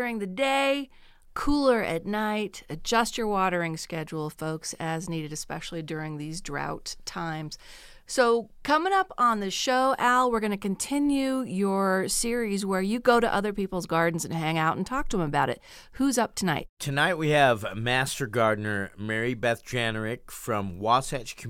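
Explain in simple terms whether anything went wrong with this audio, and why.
Nothing went wrong with this speech recording, and there is no moment where a problem can be heard. Listening all the way through turns up nothing that needs explaining.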